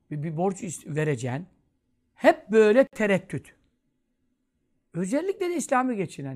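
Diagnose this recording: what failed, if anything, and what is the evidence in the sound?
The fault sits at the codec stage: a gap at a join of encoded pieces. At 2.87 s the speech drops into a silence lasting about 56 ms, until 2.93 s, and then continues exactly where it left off. Separately encoded segments were butted together with each encoder's start-up delay and final-frame padding left in place. Unlike a network dropout, nothing is concealed, repeated or lost. The hole is pure silence, and its edges are smeared by the codec, so the fully silent part is a little shorter than the gap.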